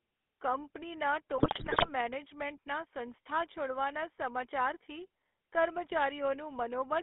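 GSM full-rate codec damage runs through the whole clip: the speech is band-limited to about 300 Hz to 3.5 kHz and sounds buzzy and gravelly, as coarse pulse-driven excitation replaces the natural voice source. This fits a 13 kbps stream. GSM bit errors then hit from 1.38 to 1.90 s, just before "મેનેજમેન્ટના સંસ્થા છોડવાના સમાચારથી": corrupted filter, pitch and gain values break the speech into squawks, pops and gargling across many frames.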